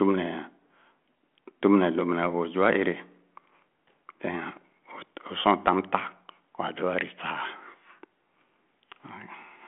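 No technical faults occur in the speech, which is carried over a G.726 telephone link at 40 kbit/s with nothing above 3.8 kHz.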